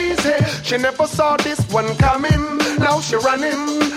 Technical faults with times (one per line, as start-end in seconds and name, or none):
none